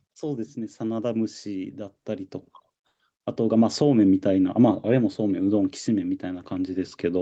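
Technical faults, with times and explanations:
0.19 to 2.38 s, automatic gain rising: voice and background swell together by about 7 dB as the gain control slowly lifts a quiet input.
2.87 to 2.99 s, comfort noise in place of the background: for 120 ms the background turns into flat, featureless hiss about 10 dB quieter, likely discontinuous transmission filling a pause with synthetic noise.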